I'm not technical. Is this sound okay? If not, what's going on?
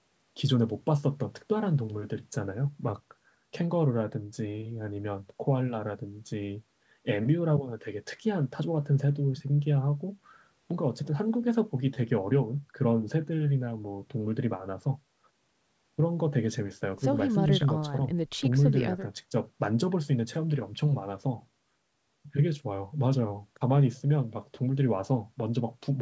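Yes, there's nothing wrong to hear here; it just has the slightly narrower sound of a normal internet call, where the very highest frequencies above 8 kHz aren't carried, and that's expected.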